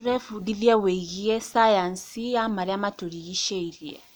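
No technical faults can be heard in this speech recording.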